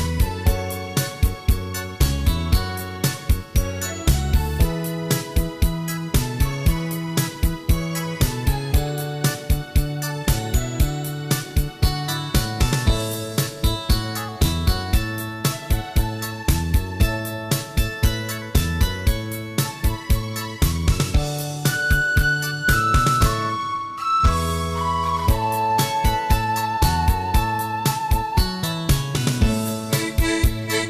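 No technical faults can be heard anywhere in the recording. Nothing breaks into or disturbs the audio at any point.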